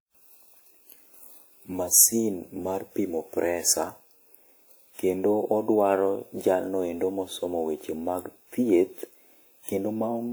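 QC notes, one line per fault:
Throughout, generation loss: the speech sounds swirly, hollow and smeared, with consonant attacks blurred beyond what a single encode at this quality would produce. The likely cause is repeated lossy coding, around four passes through a WMA-type codec at a rate near 96 kbit/s, each quantising afresh on a shifted frame grid so that noise accumulates. A spectrogram shows smeared onsets, with nothing above 20.1 kHz.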